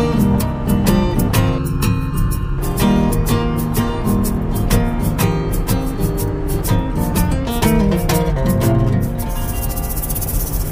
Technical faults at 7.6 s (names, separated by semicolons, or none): none